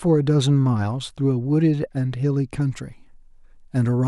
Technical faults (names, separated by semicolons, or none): pre-emphasis left on